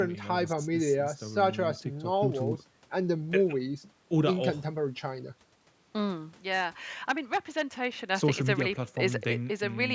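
A speech recording, passed through ordinary call microphone processing, with nothing technically wrong with it.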